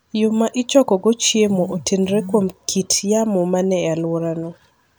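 No faults detected anywhere in the recording.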